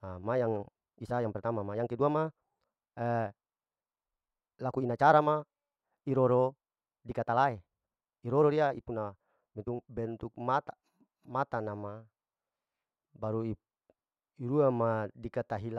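A time-stretched section runs from 0.0 to 9.9 s, where the speech plays at about 1.57 times its normal pace while the pitch stays where it should be. The likely cause is software squeezing this part to fit a shorter length, preserving pitch by discarding short slices of the waveform. The result sounds rushed, and at 9.9 s the pace drops back abruptly to natural speed.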